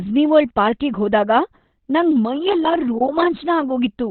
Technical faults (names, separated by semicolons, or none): Opus compression